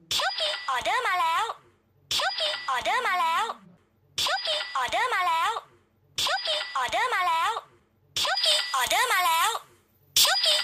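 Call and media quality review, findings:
Pre-emphasis left on, 8.37 s to end of clip. Sudden thin, bright, hissy top end. Sibilance exaggerated. Treble lift matches the FM 75 µs curve, about 13 dB up at 10 kHz relative to 1 kHz. Probable component: receiver or decoder stage missing de-emphasis. Boost applied upstream, complementary cut never applied. Earlier section unaffected.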